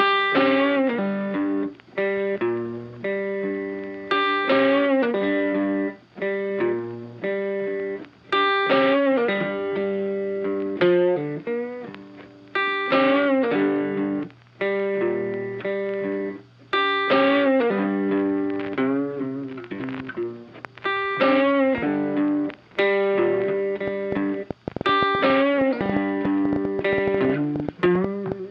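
From 23.88 s to 28.33 s a train of clicks rides over the sound: sharp, similar-shaped pops arriving about 7.7 times a second at an uneven pace, some forty in all, with the loudest standing roughly 10 dB above the audio and staying audible through any pauses. The cause is likely an outside source, such as interference from nearby equipment or a faulty connection or power supply, repeatedly injecting a short pulse into the signal.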